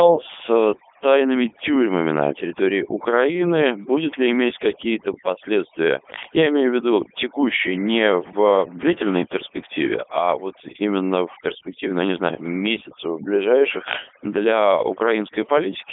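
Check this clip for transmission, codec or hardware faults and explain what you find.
Two faults run through the whole recording: overdone noise removal and Codec 2 vocoder coding.

Overdone noise removal, throughout: the background drops and breaks up into twinkling specks. A noise reducer set too strong is cutting individual frequency bands whenever they sit near its noise estimate, taking the quieter parts of the speech with them.

Codec 2 vocoder, throughout: the speech sounds robotic and buzzy, and the coding damage is heavy. It is confined to about 250 Hz to 3.6 kHz, with nothing above 3.8 kHz. The decoder rebuilds speech from sine waves using only pitch, voicing, energy and a spectral envelope, which fits its 3.2 kbit/s mode.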